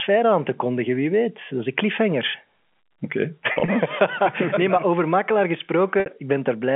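Speech carried over a narrowband telephone path, consistent with G.711 A-law at 64 kbps and a 200 Hz to 3.4 kHz band, has two bursts of packet loss with pitch repetition. From 3.52 to 3.68 s, 80 ms goes missing in short gaps spread over 160 ms, the longest 40 ms, which fits 20 ms packets. Each gap is filled by repeating the last pitch period, so the sound briefly buzzes and holds. At 6.00 to 6.06 s, right after "nee maar over makelaar", 60 ms across three lost packets is bridged the same way, by repeating the last pitch period.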